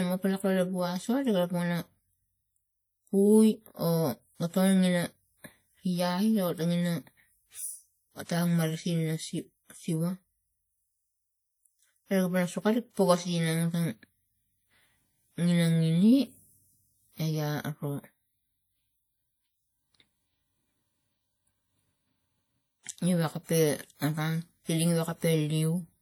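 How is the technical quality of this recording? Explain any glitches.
The speech carries plainly audible compression damage throughout. It rings and smears, with a washy hiss that swells and fades with the voice. This is likely WMA compression: its long transform blocks spread quantisation noise over tens of milliseconds, and the level of damage fits a bitrate around 48 kbps.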